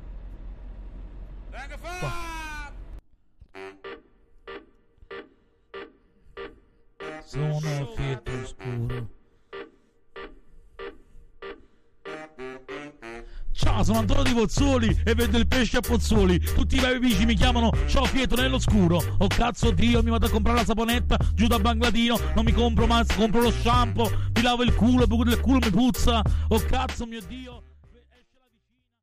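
No technical faults are present in the signal, and the only level change is a deliberate, smooth fade-out that begins at around 26.5 s and reaches silence at 29.0 s with no click or hard edge.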